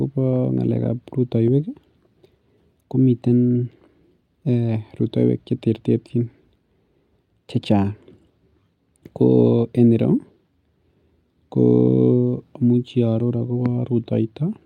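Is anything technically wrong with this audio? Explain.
No, nothing is technically wrong with this audio.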